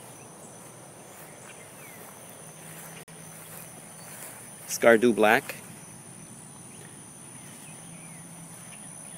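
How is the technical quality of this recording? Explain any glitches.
The recording has one technical fault, a gap between stream segments at 3.03 to 3.08 s. For about 45 ms the sound is replaced by silence with abrupt edges. Two consecutive segments were stamped with times that leave a hole between them, and playback fills it with silence. Unlike a dropout, nothing is missing: the audio resumes exactly where it stopped, and everything after it is simply pushed about 45 ms later.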